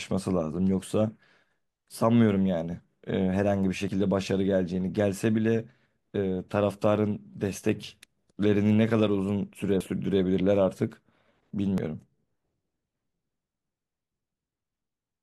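At 11.78 s the speech skips forward, with a fragment of roughly 30 ms missing and the two sides butted together without a gap. This is audio missing between chunks, likely lost while a 2-second processing block closed and the next one opened.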